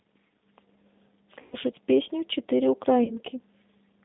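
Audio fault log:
Throughout: G.729 codec. The speech is confined to roughly 150 Hz to 3.7 kHz, so it sounds thin and muffled, with nothing in the upper range. The roughness is plainly audible and has a slightly synthetic edge. This fits the 8 kbit/s G.729A coder. It rebuilds each 10 ms frame from a vocal tract filter, a pitch predictor and a few pulses, so fine detail of the voice is lost.
1.42–1.56 s and 3.04–3.19 s: VoIP packet loss concealed by the speech codec. At these two points the speech smears into a buzzy tone or coloured noise that fades, instead of dropping out. The first gap covers about 100 ms of missing audio, which fits five 20 ms packets. The second covers about 40 ms, which points to two. The decoder repeats its last pitch and filter and lowers the gain each frame. Because every frame builds on the one before, the speech stays weak and distorted a little past each gap.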